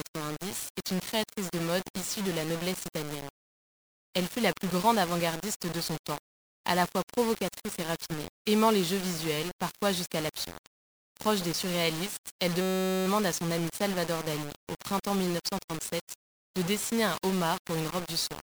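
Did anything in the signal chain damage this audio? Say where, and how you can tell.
Yes. Low bit depth without dither runs through the whole speech clip, from start to finish. The quiet parts turn gritty, and the faintest sounds sputter or drop to silence. The graininess shifts with the level of the speech and sits only about 10 dB below it. The likely cause is a sample-format conversion that rounded the audio to about 5 bits with no dither, so the error follows the signal.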